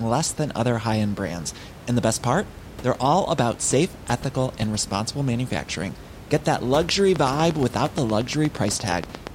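A speech clip. After "that luxury", a train of clicks runs from 7.16 to 9.28 s. About 8.5 regular, similar pops per second, roughly twenty, peak around 10 dB above the speech. Likely cause: interference or a faulty connection or power supply. Room noise sits about 17 dB below the speech.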